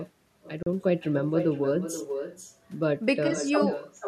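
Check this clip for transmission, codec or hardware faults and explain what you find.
Two faults are present: an uncancelled echo across the whole speech clip, and one brief dropout near the start.

Echo with no canceller, throughout: the far end's loudspeaker is feeding back into its microphone and nothing strips it out, so the speech returns after the network round trip. Each phrase is trailed about half a second later by a thinner copy, only about 8 dB quieter.

Bluetooth stall, 0.63 to 0.67 s: the sound drops to silence for 36 ms, then resumes. The likely cause is a wireless link stall, where delayed packets let the headphones' buffer empty and playback halted until retransmitted data arrived.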